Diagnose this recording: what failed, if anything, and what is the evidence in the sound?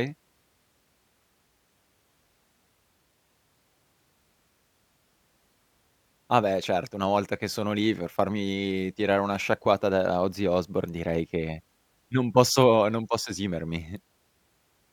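Nothing failed; no fault can be heard anywhere.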